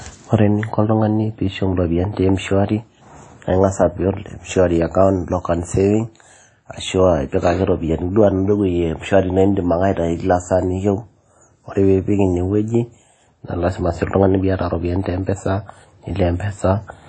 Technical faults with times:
0.00-17.09 WMA compression

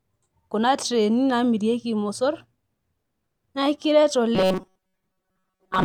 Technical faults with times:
4.35-5.84 robotic sound from repeated short buffers

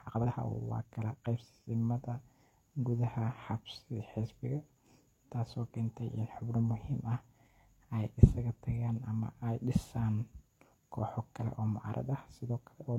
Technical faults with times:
0.00-1.76 time-stretched section

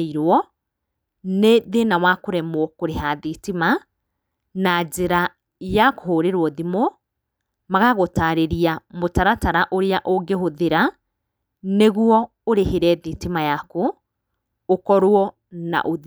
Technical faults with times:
none

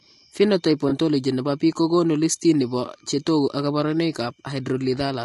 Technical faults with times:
0.00-5.24 low-delay AAC compression
0.89-0.92 AAC frame loss with concealment

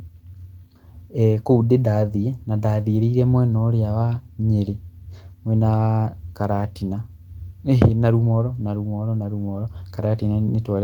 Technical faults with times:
7.81-7.86 microphone overload

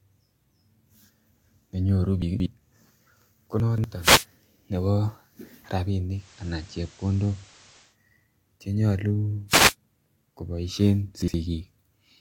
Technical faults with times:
2.22-2.46 chunks out of order
3.60-3.84 chunks out of order
4.01-4.25 wireless microphone noise hit
6.10-7.97 digital radio blending to analogue
9.48-9.75 wireless microphone noise hit
11.22-11.34 chunks out of order

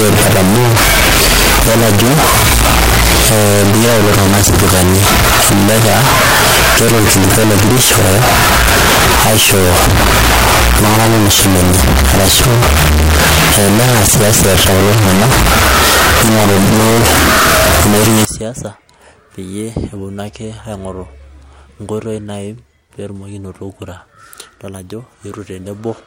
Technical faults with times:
0.00-18.25 float read as integer

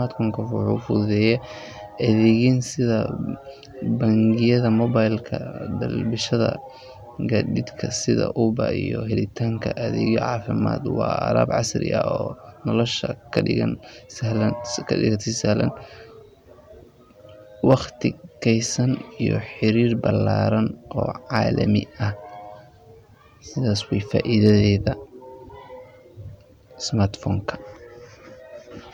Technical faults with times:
1.27 hard clipping
2.27-2.30 hard clipping
11.42 hard clipping
13.37 hard clipping
17.70-17.74 hard clipping
18.49 hard clipping
21.36 hard clipping
24.20-24.51 hard clipping

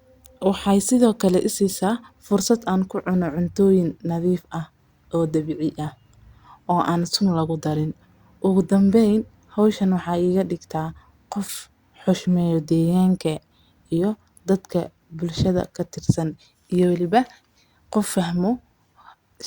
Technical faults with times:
none

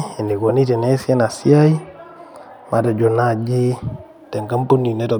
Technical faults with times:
none

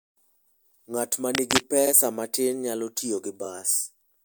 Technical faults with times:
1.34-1.61 cable scratch noise
1.86-1.91 repeated frames

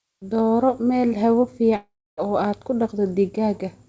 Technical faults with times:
1.76-2.19 long network dropout

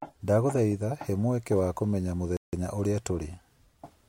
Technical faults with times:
2.37-2.53 playback stall

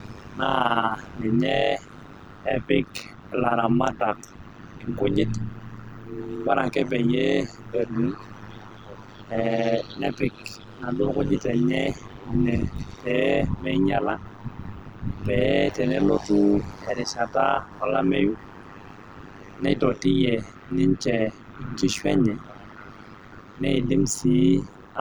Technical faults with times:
0.00-25.00 overlap-add ripple

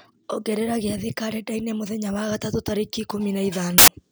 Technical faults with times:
3.78-3.88 samples built from the wrong bytes

